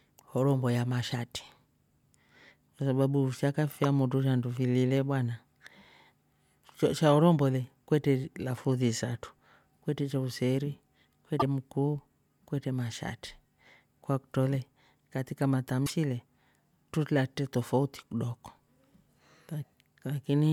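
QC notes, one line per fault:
1.11 s, 3.84 s (just before "shandu fili le bwana"), 11.37–11.43 s (between "isatru kwetre cha useri" and "mkuu kwetre mashati"), 15.83–15.91 s: damaged data in a compressed stream. Brief chirps and blips break the speech where corrupted frames are misdecoded, and the decoder loses sync while it hunts for the next valid frame header.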